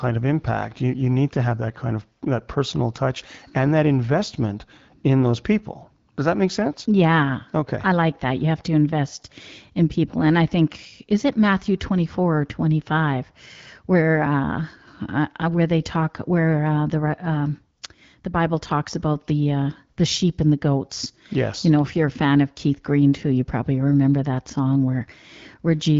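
A speech recording with no technical faults to point to anywhere in it. It has passed through the AMR wideband (HD Voice) codec at 12.65 kbit/s, which leaves the speech clear with only light coding traces and a top end that stops at about 7 kHz.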